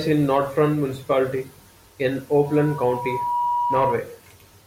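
From 2.46 s to 3.96 s a loudspeaker feedback squeal rises: the microphone re-amplifies its own speaker output at 965 Hz, swelling over about a second to roughly speech level. A spectrogram shows one bright horizontal line; the waveform thickens steadily.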